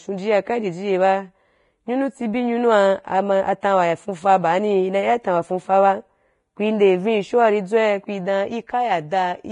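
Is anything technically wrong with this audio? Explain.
Yes. Throughout the speech, the audio has the marks of heavy Vorbis compression, likely at a low bitrate near 29 kbps. The codec kept only a coarse spectral outline and quantised the treble so crudely that fine detail became hiss. Nothing remains above 10.6 kHz, and the speech sounds grainy, roughened and smeared at onsets.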